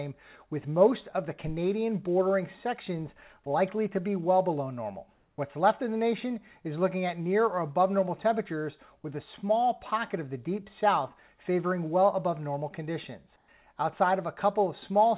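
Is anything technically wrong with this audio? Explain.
Yes. At 5.14 to 5.38 s and 13.36 to 13.48 s, the quiet background, about 46 dB and 44 dB below the loud parts, turns into flat, featureless hiss, about 5 dB and 2 dB different in level. This is likely comfort noise in place of the background: transmission paused during silence and the receiver substituted synthetic noise. The narrow call bandwidth, with nothing above 4 kHz, is the same throughout.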